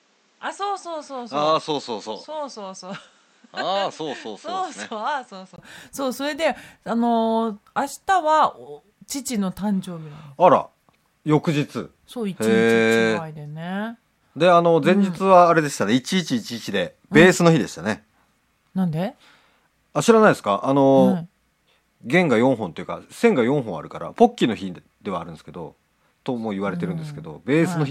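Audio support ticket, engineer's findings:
Opening 0 to 5.58 s sounds dull and boxy, nothing above 8.5 kHz, level down roughly 10 dB, with its own hiss sitting around 35 dB under the signal. Brief 20 ms dropout at 5.58 s, then full band and normal level. Likely cause: input switched to a poorer device at the start, then the system flipped back to the proper mic. The narrower band, different tone and separate noise floor all belong to that other capture path.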